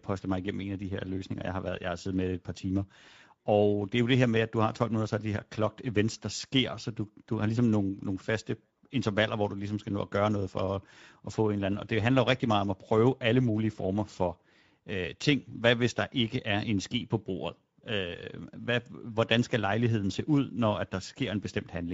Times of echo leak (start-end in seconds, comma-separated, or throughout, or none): none